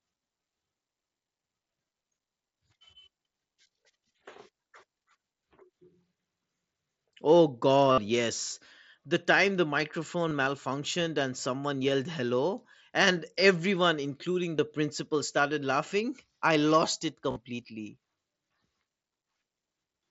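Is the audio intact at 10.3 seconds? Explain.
No. From 10.29 to 10.31 s, concealed Bluetooth headset packet loss fills a roughly 22 ms gap, which fits three lost frames, with a repeated stretch of the preceding waveform, just before "malfunctioned and someone yelled". It sounds like a brief buzzy blip. On a waveform it shows as a short periodic copy, and on a spectrogram as a sliver of repeated, smeared harmonics.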